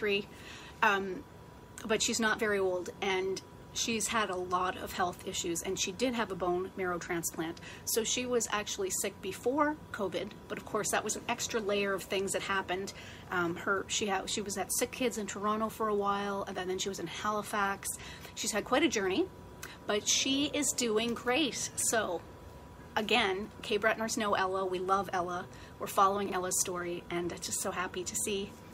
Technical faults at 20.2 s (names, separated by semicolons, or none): none